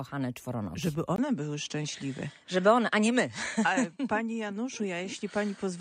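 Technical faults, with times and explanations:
1.16 s to end, input likely switched to a poorer device: brief 20 ms gap, then nothing above 9.2 kHz, a flat spectrogram ceiling, with a faint new noise floor far below signal.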